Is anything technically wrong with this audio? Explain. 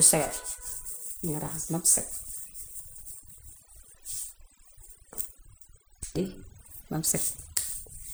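Yes. Throughout the speech, overdone noise removal: heavy spectral subtraction mutes bands near the noise estimate, leaving twinkling specks, unlike a gate, which mutes everything at once.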